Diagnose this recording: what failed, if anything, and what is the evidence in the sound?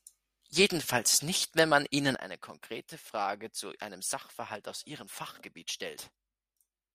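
A digital gain setting, likely changed without a ramp, causes a sudden gain jump at 2.15 s: speech and background noise fall together by about 12 dB.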